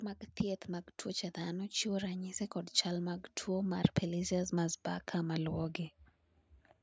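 From 0.41 s to 5.81 s, automatic gain rising: the level control judged the speech input too quiet and ramped its gain up slowly, by about 10 dB overall, so the voice and background noise swell together across those five seconds, over a band that stops at 8 kHz.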